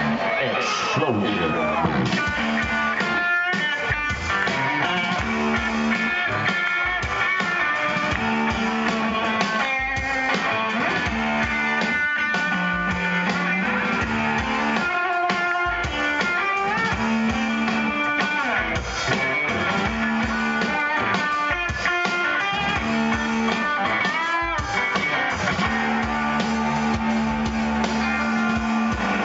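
Nothing stood out as a technical problem on listening, and the top end stopping at about 8 kHz is simply what this call path passes.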